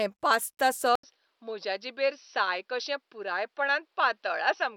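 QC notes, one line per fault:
0.95–4.77 s, input switched to a poorer device: after an 80 ms gap the speech comes back dull and boxy, with nothing above 5.9 kHz. It is also a few decibels quieter and sits over a faint new noise floor that lasts to the end. The likely cause is the system moving mid-recording to another microphone or a headset's call profile, whose narrower band, lower level and own self-noise replace the first input's.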